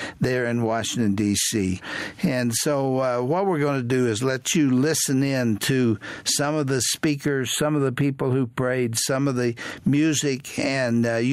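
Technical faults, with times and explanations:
Throughout: gain pumping. The level swings by roughly 15 dB. This is likely a gain set far too high with a fast limiter clamping down.
7.25 to 8.97 s: channel delay (comb filtering). The sound turns thin and phasey. One channel lags by a tiny amount, about a tenth of a millisecond, and when the two are summed the shared content cancels at fixed, evenly spaced notches, the first near 5 kHz. The notches don't move, which separates it from a sweeping phaser.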